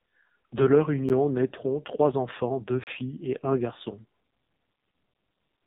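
The whole clip runs through the AMR narrowband mobile codec, and at a very low rate, something like 5.15 kbps by the sound of it. Nothing gets through above 3.8 kHz, and the speech comes out buzzy and synthetic because the vocal-tract model has very few pulses to work with.

At 1.09 s, just before "naîtront trois enfants deux", there's a block of digital silence. It's about 11 ms of zeros, which fits a 512-sample buffer that wasn't filled in time, and it's heard as a tick. A longer one runs from 2.84 to 2.87 s, between "naîtront trois enfants deux" and "et un garçon". That's a 32 ms hole where the sound cuts out and back with no fade.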